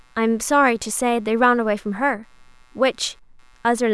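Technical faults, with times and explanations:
Throughout: computer activity noise, a faint buzzing chirp pulsing around 150 per second, about 40 dB below the speech, from the computer's load changes shifting the shared audio ground.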